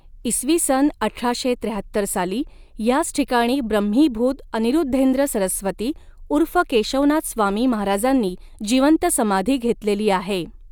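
No technical faults can be heard anywhere in the recording.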